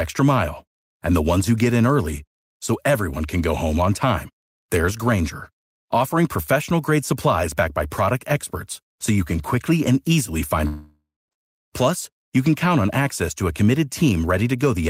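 Long network dropout from 10.67 to 11.34 s, likely lost packets: speech smears into a fading buzz, then 0.25 s of silence, and resumes with 0.64 s missing.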